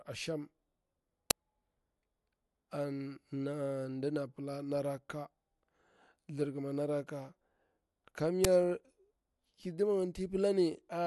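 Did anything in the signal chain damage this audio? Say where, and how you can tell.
Yes. The driver or buffer stage failed. Uninitialised buffer bursts hit the speech at 1.31 s and 8.45 s. Each is a loud, 5 ms blast of digital noise, matching one block. Stale memory was played out before real samples arrived.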